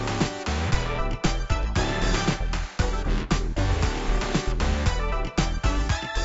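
No technical faults can be heard in this recording of sounds. Nothing in the audio points to a problem anywhere in the recording or playback chain.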